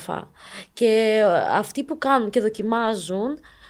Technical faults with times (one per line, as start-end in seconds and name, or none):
2.57-2.91 lost packet rebuilt from error correction